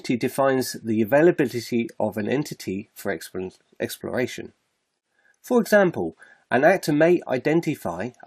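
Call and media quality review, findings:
MP2 compression, whole clip. Dull top end. Upper bands flicker in and out. Gurgling, granular grit on what remains. Likely an MPEG Layer II encode starved of bits, consistent with about 80 kbps. Sub-bands dropped and coarsely quantised. Plainly audible.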